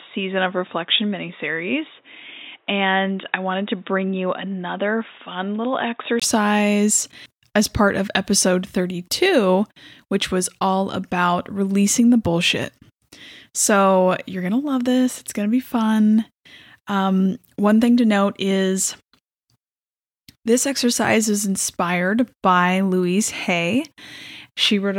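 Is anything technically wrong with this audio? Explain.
Yes. From 0.0 to 6.22 s the speech is band-limited, with nothing above 3.8 kHz, roughly 5 dB quieter, and carries its own noise floor about 40 dB down. A 20 ms gap at 6.22 s precedes fuller sound, likely an input switched to a poorer device.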